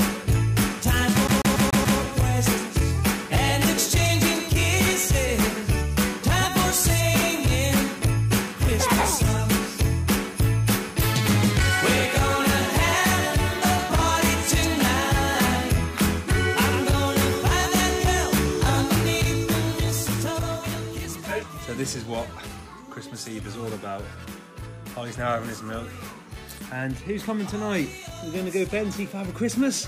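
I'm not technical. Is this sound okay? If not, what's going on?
No. From 1.27 to 1.99 s there's a CD stuck on one turn: a 143 ms snippet repeats five times, the quick, even stutter of a skipping disc.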